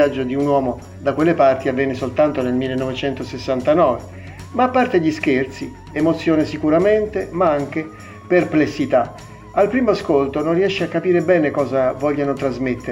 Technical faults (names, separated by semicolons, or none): none